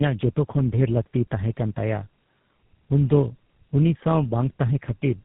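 Tandem speech coding runs through this speech recording from start to finish. It has passed through two low-rate speech coders in a row, each re-encoding the decoded, already damaged output of the one before. The result is rougher, more muffled and more warbly than one coder alone would leave it. Nothing is present above 3.8 kHz, and the artefacts fit G.729A-style coding followed by GSM full rate, joined by a G.711 A-law link.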